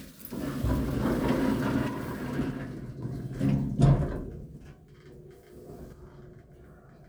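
From 1.88 to 3.02 s and again from 5.93 s to the end, the sound abruptly drops by about 6 dB, likely one channel dropping out before the mono sum.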